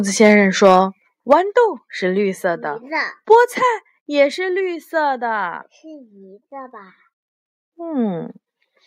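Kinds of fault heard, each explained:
Microphone overload: the loudest peaks crackle harshly, their tops flattened about 1 to 4 dB past the limit, likely from excessive input gain; the grit appears only on peaks.
Microphone volume stepped down: voice and background drop together in abrupt single steps of about 5, 4 and 3 dB, likely software reacting to clipping, not a gradual fade.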